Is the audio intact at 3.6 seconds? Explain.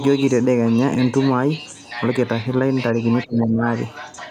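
No. From 3.24 to 3.63 s the echo canceller likely mistook both talkers for echo (speech suppressed in double talk), so the speech dips by roughly 20 dB.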